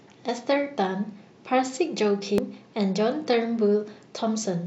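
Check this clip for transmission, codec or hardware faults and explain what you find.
One fault is present, a brief burst of damaged data in a compressed stream. At 2.38 s the speech breaks into a short glitch: corrupted bytes made the decoder misread a frame, lose sync and hunt for the next valid header.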